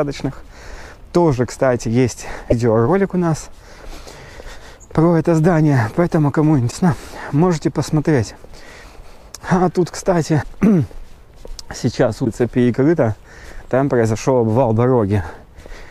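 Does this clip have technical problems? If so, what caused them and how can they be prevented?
Yes. At 2.50 to 2.53 s, 6.70 to 6.73 s, 10.41 to 10.44 s and 12.24 to 12.27 s there are brief glitches, each lasting about one 26.1 ms MP3 frame, where the audio skips ahead. The likely cause is a broken MP3 bit reservoir: frames were dropped, so the frame after each cut reached back for borrowed data and decoded bytes from a different frame. To prevent it, cut or stream MP3 only at frame boundaries that keep the reservoir data intact, or re-encode from the original source instead of splicing encoded frames.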